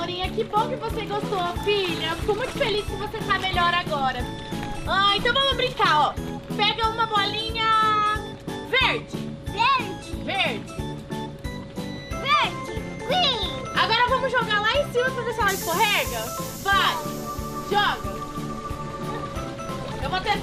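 MP2 compression runs through the whole clip. The sound is dull and carries a gurgling, grainy roughness, likely the result of MPEG Layer II coding at a low rate, with the damage plainly audible and pointing to something around 80 kbps. At that budget the encoder cannot give bits to all its sub-bands, so upper bands drop out and flicker back while the remaining ones are quantised coarsely.

DAB burbling appears from 2.43 to 2.53 s and again from 19.85 to 19.95 s. Each burst is a brief burble laid over the audio. A small fraction of bit errors has slipped past error correction into the MP2 data. Corrupted samples put short blips of noise into individual sub-bands, and corrupted scale factors make sub-bands leap in level, and the short span suggests only a handful of frames were hit each time.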